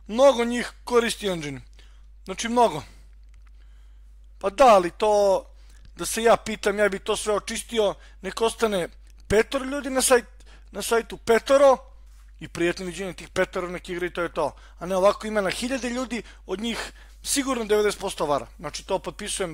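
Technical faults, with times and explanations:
13.29 s, overlap between stream segments: two adjacent segments carried overlapping time stamps, and the player trimmed the overlap from audio that was never actually duplicated. About 12 ms of sound disappears, the waveform jumps across the gap, and a brief click or tiny skip is heard.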